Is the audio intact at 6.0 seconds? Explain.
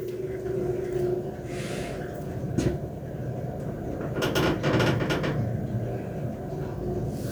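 Yes, the audio at 6.0 seconds is intact, with no audible fault at that moment.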